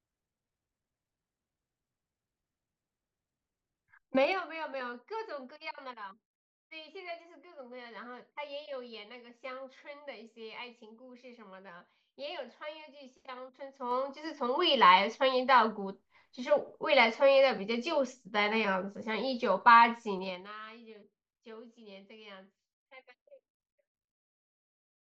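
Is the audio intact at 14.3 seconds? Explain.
No. At 14.3 seconds the speech is in the middle of zipper noise running from 13.46 to 14.59 s. The level changes by roughly 20 dB, but in abrupt 3 dB jumps about five times a second with no smoothing, so each jump leaves a small click and a ticking, zipping texture rides on the voice. That stepped ticking sets it apart from a smooth fader-style level change, which glides without clicks.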